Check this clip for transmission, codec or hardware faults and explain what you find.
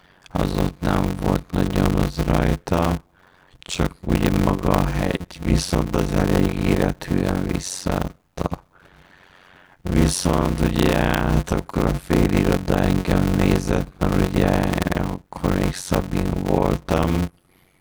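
One fault runs through the whole clip: a block size mismatch (padded), present from start to finish. One stage hands on blocks that fit 256 samples, while the next stage reads larger blocks, about 480 samples, and fills the shortfall with silence. Every block therefore carries a short gap, and the regular gaps produce a buzz at about 91.9 Hz. Because silence is inserted rather than audio stretched, the speech runs at roughly 0.53 times normal speed but keeps about its normal pitch. That is the distinction from a sample-rate mismatch, where slowing would drag the pitch down with it. The strict periodicity of the buzz also sets it apart from random packet dropouts.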